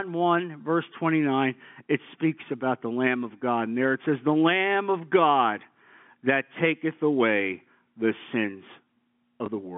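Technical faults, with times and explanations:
9.46 to 9.48 s, packet loss with last packet repeated: a 20 ms gap, consistent with a single lost packet, was filled by replaying the previous packet's audio. The copy seldom aligns with the speech's pitch period, and this single repeat comes across as a small blip within the 150 Hz to 3.5 kHz G.711 telephone band.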